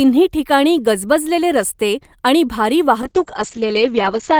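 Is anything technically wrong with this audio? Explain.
Yes. From 3.02 s to the end of the clip there is a call bitrate drop. The call's bandwidth estimate fell and the encoder was made to spend far fewer bits, with a coarseness that points to a fall from around 32 kbps to about 8 kbps. The codec also narrowed its audio band from 20 kHz to 8 kHz, so the speech loses its top end and turns muffled and rough, and it doesn't recover before the clip ends.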